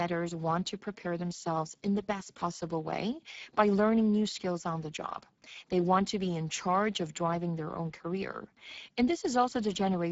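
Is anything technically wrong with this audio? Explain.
Yes. Throughout, the Speex codec, at a setting that points to about 10 kbps, starves the speech excitation of bits, leaving it plainly noisy and hoarse, with nothing above 7.7 kHz.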